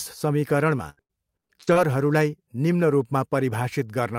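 Speech, with repeated packet loss (robotic sound) from 0.89 to 1.77 s: six dropouts, the longest 89 ms, are patched by extending the preceding sound, so about a third of that stretch is concealed and the speech turns choppy with pieces missing.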